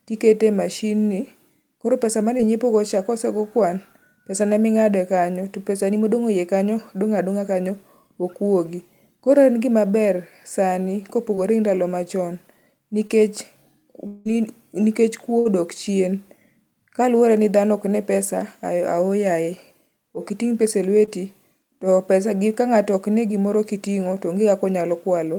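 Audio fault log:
2.37, 11.35, 13.07, 21.05 s: short concealed packet loss. About 20 ms went missing each time. The receiver extended the last sound, leaving a brief smear or wobble.
14.07 to 14.27 s: long network dropout, likely cause. About 180 ms never arrived. A continued buzz or hiss fills the whole gap, then the audio resumes further on.
15.39 to 15.47 s: burst of packet loss. About 60 ms was lost in a row. The last sound is held and fades as a buzz or hiss, then the audio skips ahead.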